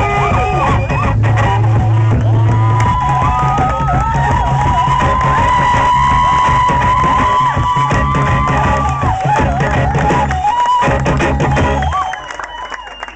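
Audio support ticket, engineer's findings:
Nothing turned up on a listen through, so there's no fault to log on this one.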